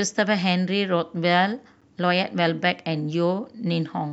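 At 1.81 s, a gap between stream segments cuts a hard-edged silence of about 9 ms into the speech. Segment timestamps failed to meet, and the player filled the hole with nothing.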